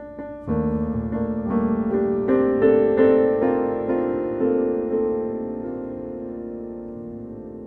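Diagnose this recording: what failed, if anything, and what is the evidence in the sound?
Nothing stood out on listening that would point to a failure at any stage of the chain.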